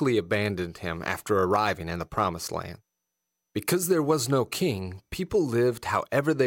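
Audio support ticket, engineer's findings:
No defects observed on the speech signal; level, continuity and timing are stable throughout, with nothing requiring follow-up.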